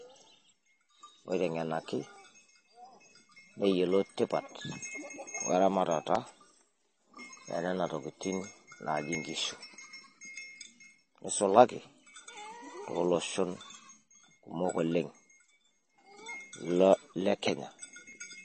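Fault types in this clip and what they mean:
MP3 compression: The speech has plainly audible codec damage and nothing above 8.3 kHz, likely from MP3 encoding at a low bitrate around 32 kbps. A spectrogram shows a hard flat ceiling at 8.3 kHz, with patchy, flickering energy below it where weak components drop in and out.
Periodic USB or driver dropouts: From 0.17 s to 18.13 s, roughly every 1.0 s, a couple of milliseconds of audio is skipped, about twenty times, giving regular ticks. The waveform shows abrupt splice jumps, and the spectrogram shows thin vertical broadband lines evenly spaced.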